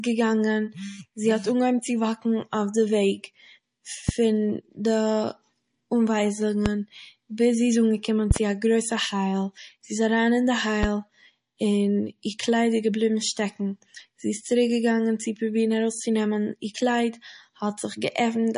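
The speech has been through MP3 compression throughout, most likely at a starved bitrate that fits roughly 40 kbps. Short of bits, the encoder discards weaker frequency lines frame by frame and cuts everything above 10.6 kHz. The damage is plainly audible: the speech sounds dull at the top, with a watery, swirling texture as detail flickers in and out, metallic chirps on the s sounds, and softened attacks.

Loud pops come at 4.09 to 4.11 s, 6.66 to 6.68 s, 8.31 to 8.39 s just after "ביז זי איז אנגעקומען", and 10.83 to 10.86 s. Each is likely a sudden voltage step or pulse, from a plug, switch, static discharge or driver glitch, that the following circuitry shapes into a brief click. They stand about 15 dB above the speech at 4.09 and 10.83 s and about 20 dB above it at 6.66 and 8.31 s. The 8.31 s event is two pops in quick succession. The speech continues underneath each one.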